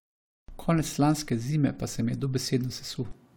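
Nothing in the speech recording points to a technical fault in the signal chain at any point.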